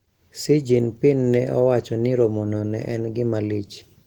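Opus voice compression runs through the whole speech clip, with plainly audible damage. The sound matches the codec's hybrid mode at a bitrate around 16 kbps. A linear-prediction layer codes the band below 8 kHz and a transform layer fills the band above it, so the speech sounds slightly hoarse and synthetic. On a spectrogram, energy reaches about 20.1 kHz, but above 8 kHz it looks coarse and patchy, in blocks consistent with 20 ms frames.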